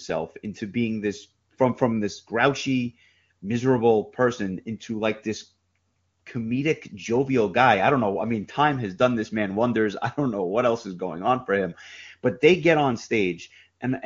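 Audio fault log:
Nothing stood out on listening to this speech clip, which sounds like it has passed through the AMR wideband (HD Voice) codec at its top rate, where any trace of coding is faint at most.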